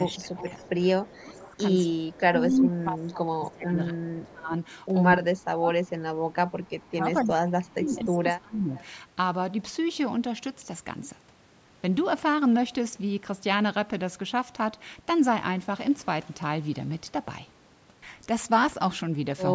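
From 0.11 to 2.65 s a faint delayed copy of the speech trails it by 245 ms, roughly 15 dB down. This is echo leak, likely from a far-end loudspeaker path the echo canceller failed to clear. On a spectrogram the harmonic bands repeat a quarter-second later as weaker ghosts. Overlapping it, from 0.2 to 4.54 s, the speech dips by as much as about 20 dB, across roughly three seconds in all, as speech suppressed in double talk: the canceller likely turns down the near talker while echo is present. The waveform envelope sags in chunks. Brief echo scraps return at 4.22–4.31 s, around 30 dB down, and at 8.77–8.82 s, around 25 dB down, each showing as a short faint smear. Between 5.17 and 8.76 s the suppression recurs with drops of up to about 25 dB, leaving clipped-looking gaps in the envelope. No content appears above 8 kHz.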